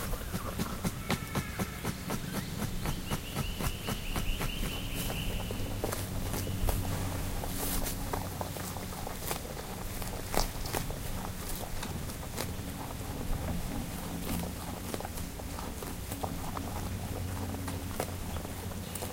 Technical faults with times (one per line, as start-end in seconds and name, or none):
none